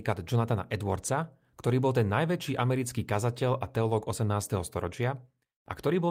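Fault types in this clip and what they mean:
No faults detected on this speech recording.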